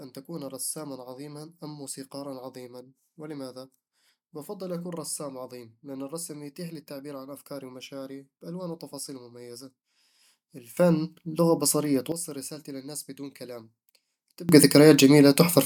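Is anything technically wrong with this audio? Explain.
Yes, there's a sudden gain jump twice in this speech. At 10.77 s the level leaps about 12 dB until 12.12 s, just before "رسالتي للناس بدون كلام", then at 14.49 s it jumps about 22 dB through to the end. Speech and background noise rise together with no ramp, likely an abrupt gain setting change.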